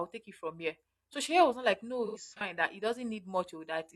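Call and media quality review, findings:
Smeared, phasey patch 2.06–2.41 s, just before "that he". AAC frame loss with concealment: decoder repeating last good spectrum over scattered gaps, longest about a tenth-second.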